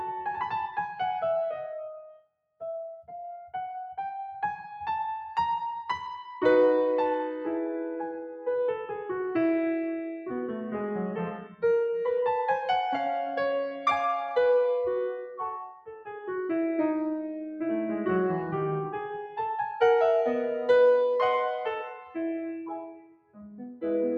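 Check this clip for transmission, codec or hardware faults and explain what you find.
The music passes through a noise suppressor built for speech, and in three places it cuts the sound hard.

Throughout the clip, the noise suppressor is applied to music. It mistakes sustained tones and decaying tails for background noise and pulls them down. Attacks come through, but held material sinks. The level swings by around 5 dB as the suppressor opens and closes. The music pumps and thins, with a fluttering, unsteady body.

At three points the suppressor cuts the sound much deeper. From 2.12 to 2.62 s the drop reaches about 22 dB. From 15.67 to 16.08 s it reaches about 16 dB. From 22.76 to 23.57 s it reaches about 22 dB again. Each time it judges the steady or fading music to be noise and clamps down. The sound briefly collapses and its decay ends abruptly.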